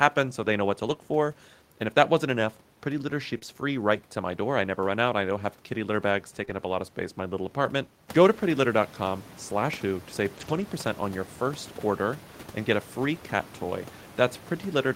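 At 0.89 s, just after "they know what to", a lost packet rebuilt from error correction stands in for 20 ms. The next packet carried a low-bitrate copy of the lost one. The decoder played that copy, so nothing drops out, but the sound turns briefly rough and grainy.

Right after, from 0.93 to 0.97 s, comes a short concealed packet loss. About 20 ms never arrived. The receiver extended the last sound to fill the gap, then blended back. It is heard as a quick smear.

A second concealed loss follows at 3.39 to 3.43 s. Again about 20 ms is missing and patched over. This one gives a brief wobble.

At 6.45 to 6.49 s, after "have kitty litter bags", a third concealed loss smears the sound for a moment. At 6.49 to 6.51 s, just before "up a lot of", another rebuilt packet adds 20 ms of coarser texture.

From 10.37 to 10.63 s, error-correction copies are used repeatedly, which points to several packets lost close together. 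About 140 ms is rebuilt from those copies. The sound stays continuous but goes rough and noisy over those 140 ms.

Room noise also rises by about 13 dB around 8 s. It still sits about 21 dB below the speech.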